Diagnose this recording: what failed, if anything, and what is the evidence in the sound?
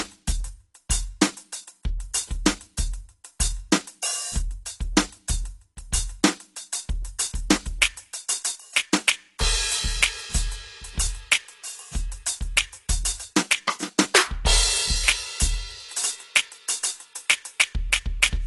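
Codec stage, likely AAC compression: the music is dull and smeared throughout, with nothing above 11.5 kHz. Unlike a plain low-pass filter, it also has audible coding damage, which fits roughly 32 kbps AAC-LC.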